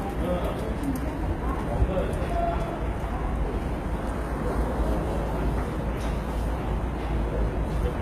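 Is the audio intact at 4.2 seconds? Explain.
No. At 4.2 seconds the sound carries the same damage heard through the whole clip, and it is plainly audible. The likely cause is HE-AAC compression at a very low bitrate, which fits roughly 20 kbps. Only the lower spectrum is truly coded. The treble is rebuilt by copying lower bands upward, so its harmonics do not line up with the original. The top end sounds gritty and metallic, with nothing above 14.9 kHz.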